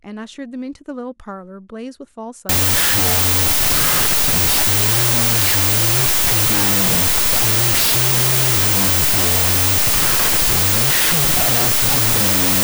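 From 2.49 s on, the speech sinks into loud noise at half speed and lower pitch: wrong sample width, fitting 32-bit float data read as 16-bit integers.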